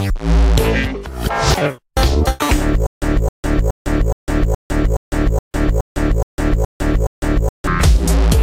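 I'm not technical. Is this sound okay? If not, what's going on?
No. The playback likely stalled and kept retrying, causing a stutter with silent gaps from 2.87 to 7.67 s: a 266 ms snippet repeats 11 times, each followed by 155 ms of silence.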